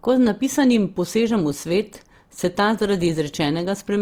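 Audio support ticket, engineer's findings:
Rough, grainy speech throughout, harmonics smeared into noise, full bandwidth to 20.2 kHz. Likely Opus compression, CELT mode: starved bands noise-filled, consistent with about 24 kb/s.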